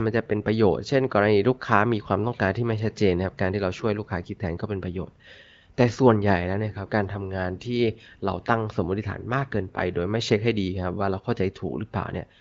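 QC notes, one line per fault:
No faults found.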